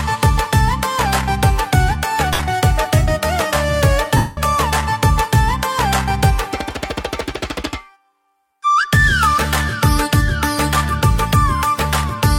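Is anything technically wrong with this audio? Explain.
Yes. There are two bursts of lost LE Audio frames, from 2.33 to 2.39 s (60 ms) and from 4.17 to 4.37 s (about 202.5 ms), both fitting 7.5 ms LC3 frames. The decoder fills each gap by reusing the last spectrum with scrambled signs, so tonal content becomes a hissy smear. The longer gap fades toward silence as concealment gives up. A plain dropout would cut straight to silence, but here noise lingers first. The light lossy compression underneath is slight, at most a faint coding texture.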